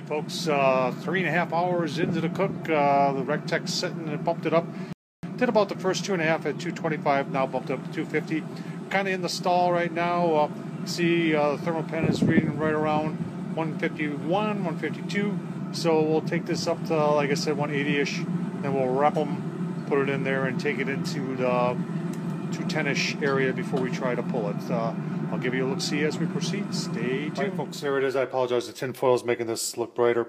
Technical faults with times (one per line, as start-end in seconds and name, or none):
4.93-5.23 rebuffering stall